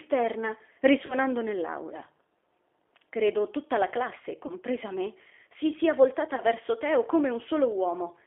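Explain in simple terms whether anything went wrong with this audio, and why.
Something did go wrong. The whole clip of speech passed through the G.729 codec, a phone-call codec that rebuilds the voice from a simple model. Only the band from about 300 Hz to 3.4 kHz survives. The voice sounds narrow, rough and slightly synthetic throughout.

There is also VoIP packet loss concealed by the speech codec. About 30 ms of audio went missing each time, which fits a single lost packet. The decoder filled each gap by stretching the last sound into a buzzy tone or coloured noise that fades. The voice stays weak briefly afterwards. This happens at 1.06 to 1.15 s, at 4.46 to 4.54 s between "tutta la classe" and "me si sia", and at 6.35 to 6.40 s, right after "me si sia".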